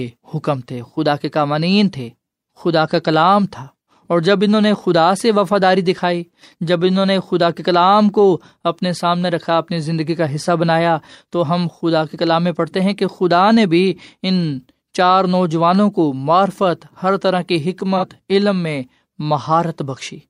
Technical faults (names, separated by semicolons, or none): AAC frame loss with concealment